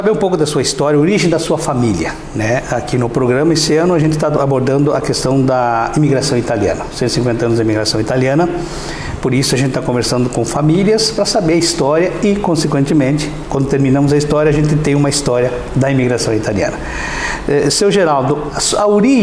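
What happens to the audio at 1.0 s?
Nothing goes wrong at 1.0 s; the audio plays through that moment intact, with no dropout, click or distortion.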